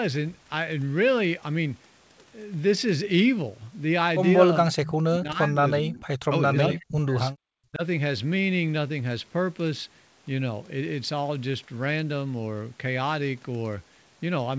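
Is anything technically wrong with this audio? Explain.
Yes. An echo canceller likely mistook overlapping talk for echo, causing speech suppressed in double talk: deep dropouts, up to about 40 dB, at 4.6–6.07 s and 6.28–7.2 s, and a shallower dip at 7.7–7.83 s.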